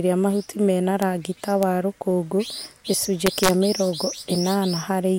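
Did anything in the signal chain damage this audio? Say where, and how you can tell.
Yes. Integer overflow in a fixed-point gain or sample-format conversion stage causes sharp cracks at 1.02 s and 1.63 s, and from 3.27 to 3.50 s, where peaks run about 5 dB over full scale. The waveform jumps full-range to the opposite sign instead of flattening, leaving broadband vertical streaks on a spectrogram.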